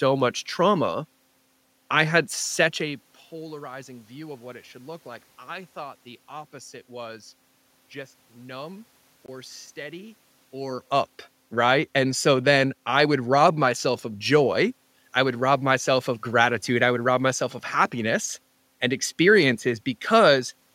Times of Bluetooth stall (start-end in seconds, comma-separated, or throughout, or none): 9.26-9.28